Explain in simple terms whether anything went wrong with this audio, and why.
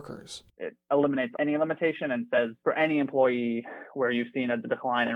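At about 2.37 s there is a tiny glitch, lasting only about a hundredth of a second. This is damaged data in a compressed stream: part of the stored file was wrong, so the player briefly misread that piece and had to find its place again. Unlike a simple dropout, where the sound just goes silent, or a click from a bad edit, this one comes from the player losing its place in the file.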